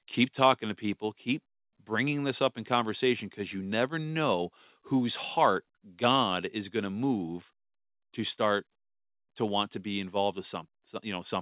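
At 1.02 s the speech and background drop by about 1 dB in one step, likely the microphone volume stepped down by the call software.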